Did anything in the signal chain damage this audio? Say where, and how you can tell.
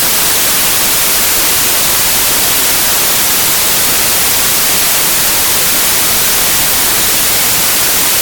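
Yes. The sample-format conversion stage assembled each sample from the wrong bytes, misreading byte order or alignment so the fast-changing low bits became the dominant part of every value. The result is loud, harsh broadband noise across the whole recording.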